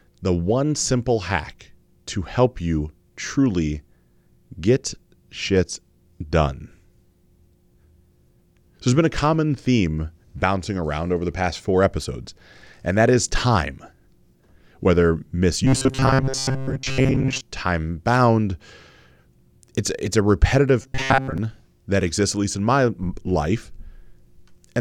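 From 15.65 to 17.41 s, ending just before "time bound", and again from 20.82 to 21.38 s, before "that exists at least", the speech turns into robotic sound from repeated short buffers: a rigid, metallic buzz near 133 Hz, most likely from a roughly 7.5 ms fragment replayed while most of the real audio was skipped.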